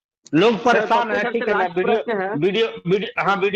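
At 2.78 s there is a short stall from a late packet, lasting until about 2.88 s. The next packet arrived late, the jitter buffer emptied, and the receiver held the last sound for about 65 ms until the data caught up. Playback then resumed exactly where it had stopped, so nothing is lost, but the held portion drags audibly with a faint buzzy or slightly dipped texture, and everything after it runs about 65 ms later.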